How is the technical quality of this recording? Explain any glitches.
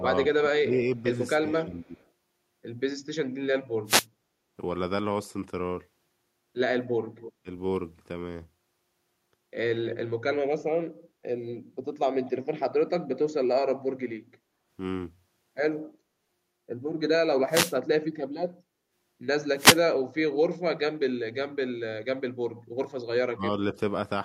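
The recording is rough in places, with three kinds of glitch spread through the speech.

Speech suppressed in double talk shows up from 0 to 1.94 s, then at 7.43 to 7.48 s and 23.33 to 23.44 s. The level dips sharply: about 15 dB early on, for roughly half a second in total, and about 20 dB in the later two spots. When both ends talk at once, the echo canceller likely can't tell the local talker from loudspeaker echo, so it ducks everything.

Echo leak appears as short delayed ghosts of the speech at 1.83 to 2.08 s, 7.2 to 7.33 s, 9.87 to 9.97 s, 10.6 to 10.64 s and 12.26 to 12.31 s. The delays run from 228 to 289 ms. The first one is very faint, and the rest sit about 15 to 25 dB under the speech. Most likely a speakerphone's canceller isn't fully removing what its mic hears, so scraps get sent back.

Wireless microphone noise hit shows up at 3.86 to 4.06 s, 17.49 to 17.75 s and 19.56 to 19.81 s as brief swishes of static over the speech. 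That's the FM radio link fading as reflections cancel, which lets receiver noise surge up for a fraction of a second.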